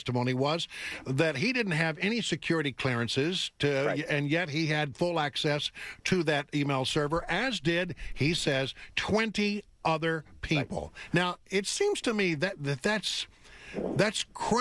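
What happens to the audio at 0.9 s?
At 0.9 s the resampler restarted on every block, as it does across the whole clip. Each 40 ms block is converted from 48 kHz to 24 kHz on its own, so every block edge is slightly wrong. The result is a 25 Hz tick pattern, heard as a faint buzz under the sound.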